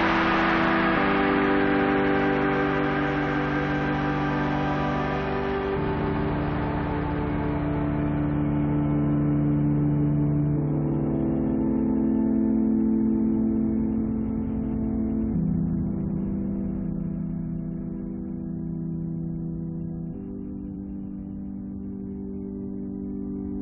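Compressed frames skipped at 20.75 s: the audio jumps ahead by about one frame, which fits a 23.2 ms frame.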